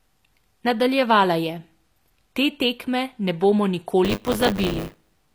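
From the first second the speech has a gritty, metallic top end: the treble sounds bright enough, but s sounds come out lispy and brittle, as if the highs were synthesised. That's likely HE-AAC compression at a low bitrate, something near 24 kbps. Only the lower band gets properly coded, and the upper band is rebuilt by copying lower bands upward and shaping them with a coarse envelope. The harmonics don't line up across the crossover, which is where the artificial sheen comes from.

At 4.04 s buffer tearing kicks in and runs to the end of the clip. The speech picks up a robotic rattle at 100 Hz, and it's present only while there's signal. The app writing into the ring buffer and the hardware reading it have drifted until they cross inside every period. So in each buffer a small slice, around 15%, is stale audio from roughly 20 ms earlier, with a hard join at both edges. Those joins repeating every buffer make the buzz.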